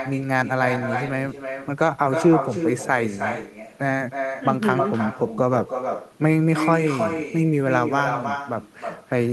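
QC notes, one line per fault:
Throughout: echo with no canceller. Every phrase of this speech is trailed by a second, weaker copy arriving roughly a third of a second later, sitting only about 6 dB below the direct sound. The far end is playing the call through a loudspeaker, its microphone picks that playback up, and nothing cancels it, so the sound makes the network round trip and returns thinner, smearing each syllable into the next.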